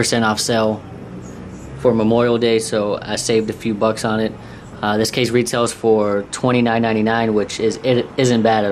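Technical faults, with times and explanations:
Throughout: MP2 compression, likely near 80 kbps, starves sub-bands of bits, switching off upper bands and coarsening the rest, so the sound is plainly dull, gurgling and granular.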